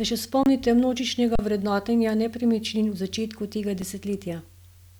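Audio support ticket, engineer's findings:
Underrun with held sample at 0.43–0.46 s (27 ms), 1.36–1.39 s (35 ms) and 3.82 s (about 3.5 ms). Symptom: speech freezes on a flat level, then resumes. Probable component is the output buffer feeding the converter. Buffer ran dry, converter held its last value, and around 30 ms, 40 ms and a few ms of live audio went missing, hence the jump on return.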